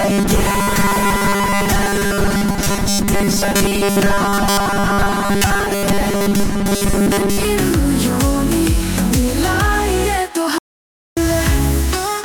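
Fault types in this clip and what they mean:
Robotic sound from repeated short buffers: From the start of the clip to about 7.4 s, the audio carries a rigid, metallic buzz at 200 Hz. That pitch matches a 5 ms repeat period. The likely cause is audio arriving too seldom, with the software filling each gap by looping the last 5 ms slice. Most of the genuine material in this stretch is skipped, so the original sound survives only as a loose outline under the buzz.
Audio dropout to silence: From 10.58 s to 11.17 s, a span of about 584 ms, the sound cuts off abruptly. It is replaced by silence, with no background or room tone left, and then resumes just as suddenly. Whatever occurred during that gap is lost. The hard drop to silence points to the input signal having likely been interrupted, through a brief disconnection, a link failure or a stray mute, while recording continued.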